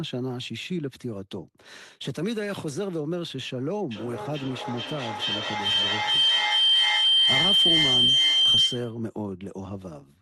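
Feedback howl runs from 3.91 to 9.04 s: the microphone picks up a nearby loudspeaker on the same call, and each trip round the loop comes back louder. A tone near 3 kHz builds over the speech, the loop repeating about every 0.4 s, and peaks about 9 dB above the speech.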